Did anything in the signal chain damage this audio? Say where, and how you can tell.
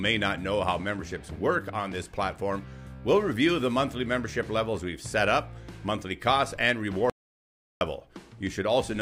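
Yes. An audio dropout to silence runs from 7.10 s to 7.81 s, cutting about 0.71 s out of the sound near the end of the clip. The signal stops abruptly, holds silence with no room tone, then resumes mid-flow. On the waveform this is a flat line; on a spectrogram, a fully black vertical band across all frequencies. The input was likely lost at the capture stage, a disconnected device, failed link or momentary mute, while the recorder kept writing silence.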